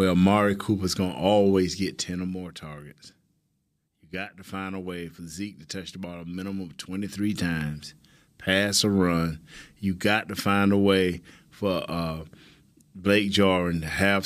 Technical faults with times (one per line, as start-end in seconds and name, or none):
1.60-2.55 zipper noise
6.87-7.38 zipper noise